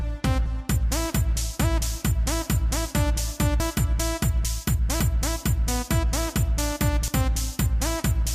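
At 3.6 s, 5.0 s and 7.08 s the sound jumps forward abruptly with no gap of silence, each time missing a short stretch of audio: about 70 ms at the first point and roughly a tenth of a second at each of the other two. These are most likely dropped buffers (overruns). Samples sat uncollected until the hardware overwrote them, so the lost section disappeared and the audio on either side was spliced straight together.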